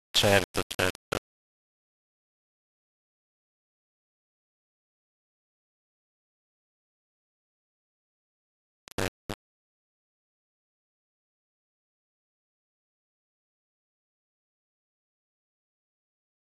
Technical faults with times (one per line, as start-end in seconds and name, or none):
0.00-16.45 low bit depth without dither